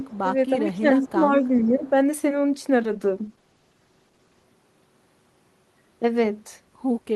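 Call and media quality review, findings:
Echo leak. Delayed repeat of the talker at 0.00–0.18 s, 1.01–1.10 s and 1.82–1.90 s. It lags by 432 ms and sits around 10 dB below the direct speech, dropping to around 15 dB below in the last burst. Likely cause: the far end's echo canceller on a loudspeaker path, passing residual mic pickup back into the call.

Speech suppressed in double talk. Level dips in the talker during overlap. At 0.22–0.36 s the drop is about 15 dB. At 0.64–1.44 s it is about 10 dB, spread over roughly 400 ms. At 1.64–1.83 s it is a shallow dip of about 5 dB. Likely cause: echo canceller attenuation that cannot separate local speech from loudspeaker echo, so both are ducked.

Call bitrate drop. Audio turns rough and muffled from 2.79 s to 4.51 s. Encoder target falls from 32 kbps to 13 kbps and stays at the floor for 1.66 s. Coarser Opus quantisation and a lowered audio bandwidth strip the highs. 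Quality returns as the rate recovers at the end of the span.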